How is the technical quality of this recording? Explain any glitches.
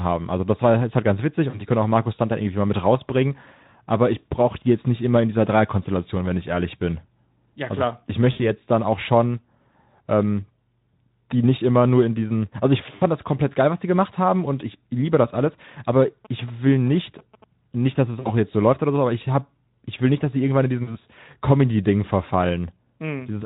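The recording has two kinds of glitch: five brief dropouts and one stretch of radio interference. The Speex speech coding underneath adds only light coding damage.

VoIP packet loss concealed by the speech codec occurs at 1.49–1.65 s, 8.31–8.40 s, 12.95–13.04 s, 18.19–18.32 s and 20.83–20.97 s. Each gap covers roughly 40 to 80 ms of missing audio. The decoder fills it by extrapolating, so the speech smears into a fading tone or noise and stays weak briefly afterwards.

GSM signalling bursts run from 16.02 to 17.44 s. A nearby 2G phone's radio bursts are rectified into a galloping ticking and buzzing at 217 Hz, around 20 dB below the speech. Unlike the dropouts, this interference is added on top and leaves the speech intact.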